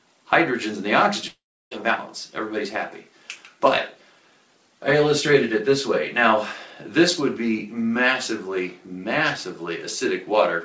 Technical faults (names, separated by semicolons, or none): long network dropout